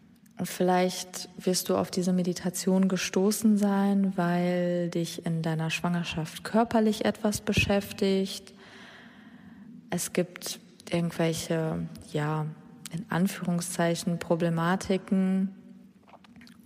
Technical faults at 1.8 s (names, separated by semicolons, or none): none